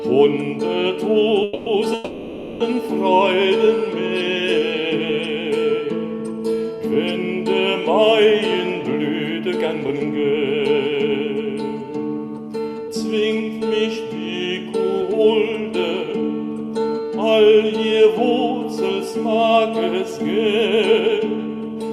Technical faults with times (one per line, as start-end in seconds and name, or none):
1.43-1.69 call audio freeze
1.94-2.63 call audio freeze
9.89-11.24 jitter buffer speed-up
20.24-21.90 jitter buffer speed-up